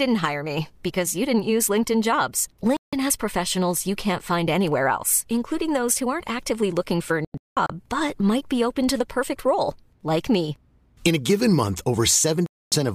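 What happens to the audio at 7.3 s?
The speech hits a digital broadcast dropout from 7.25 to 7.70 s. The receiver mutes on failed frames, so about 0.32 s of audio vanishes in several short holes, the longest 0.19 s. That fits roughly ten lost frames. The missing sound never returns.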